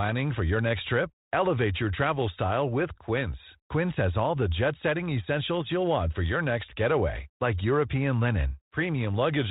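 Nothing faulty can be heard in this speech recording.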